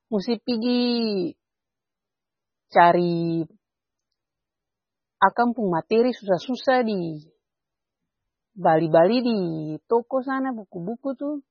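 The encoder was likely starved of bits, with heavy MP3 compression running through the whole recording, at a damage level that points to a very low rate of around 16 kbps. With so little to spend, it cut the treble outright, leaving nothing above 6.6 kHz, and dropped weaker frequency lines that flicker in and out between frames. The speech sounds dull and watery, with a swirling texture and chirpy, smeared consonants and s sounds.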